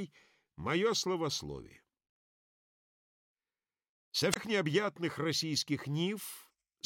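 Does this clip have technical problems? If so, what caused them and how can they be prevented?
Yes. There is damaged data in a compressed stream from about 4.30 to 4.37 s, a burst of roughly 70 ms heard as a chirp, squawk, click or short hole. Corrupted bytes there made the decoder misread those frames, lose sync and hunt for the next valid frame header. A spectrogram would show a narrow vertical disturbance, and the waveform an abrupt, jagged discontinuity. Preventing it means verifying file integrity with checksums and using error-checked transfer and storage.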